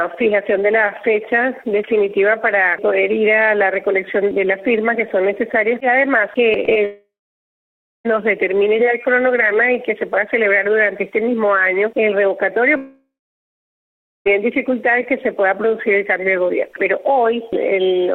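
Two short bursts of packets fail to reach the decoder in time, each leaving about 20 ms of the stream missing. The receiver covers them with short concealed packet loss, extending the preceding sound and cross-fading back into the real signal. Each gap can be heard as a brief smear or wobble, at 6.65 to 6.69 s and again at 6.73 to 6.77 s. Immediately after, from 6.85 to 8.06 s and again from 12.76 to 14.27 s, the audio cuts out in what is likely a long network dropout, with about 1.2 s and 1.5 s of signal never arriving. In each case the last sound is carried on briefly as a fading buzz or hiss. Then comes near-silence lasting roughly a second, about 0.96 s in the first gap and 1.17 s in the second. The audio resumes further on with the missing portion simply gone.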